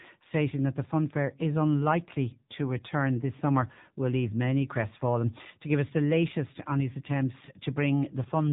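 The whole clip has gone through the AMR narrowband mobile codec, and the damage is plainly audible. Nothing above 3.8 kHz survives, and the speech has that buzzy, synthetic edge from the pulse-driven vocal tract model. The coarseness fits one of AMR-NB's lower modes, around 7.4 kbps.

From 5.28 s to the end, pre-emphasis is left on. The treble lift used for transmission, a 50 µs FM-style curve, never got its matching cut. What top end remains is tilted upward, so the last stretch sounds thinner, brighter and more sibilant.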